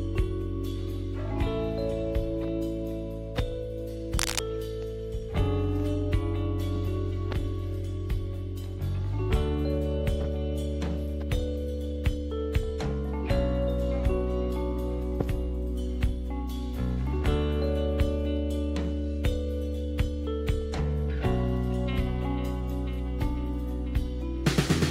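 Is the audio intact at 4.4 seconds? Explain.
No. Cable scratch noise runs from 4.14 to 4.40 s, ending right at that moment. A worn cable or connector being moved likely made its contact resistance flicker, adding dense, uneven noise bursts about as loud as the sound itself, heard as brief scratching.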